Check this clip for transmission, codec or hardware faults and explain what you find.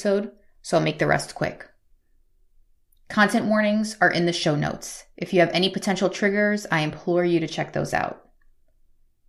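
Nothing stood out on listening to this speech recording, so there is no fault to report.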